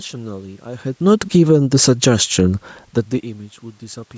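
At 1.05 s the automatic gain falls. The gain control judged the input too loud and pulled its gain down gradually. Over about a second, to 2.21 s, the speech sinks by about 5 dB. The room background sinks with it.

At 1.5 s, while that drop is still under way, the automatic gain starts rising. The control now judged the input too quiet and raised its gain. By 2.65 s it has climbed about 4 dB. Speech and background swell back up together.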